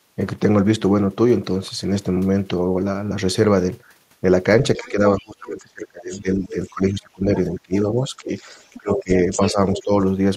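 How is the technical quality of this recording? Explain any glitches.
The recording has a couple of related echo-handling problems in the second half of the clip, both typical of a speakerphone-style call.

Other side's voice leaking through: A second, fainter voice shows up from 4.75 to 5.27 s, 6.11 to 6.72 s and 8.36 to 9.83 s. It's about 25 dB and then about 20 dB under the main talker in the first two spots, then much more obvious at about 10 dB down in the last one. The likely cause is the far end playing on a loudspeaker and the echo canceller not fully scrubbing it from the mic.

Speech suppressed in double talk: From 4.77 to 8.31 s the main talker keeps dipping, at worst by around 25 dB, for roughly two seconds in total, and again from 8.78 to 9.92 s, down by around 20 dB for about half a second. Those dips line up with the leaked voice, so it's likely both sides talking at once. 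The canceller couldn't tell its own talker from the echo and ducked everything.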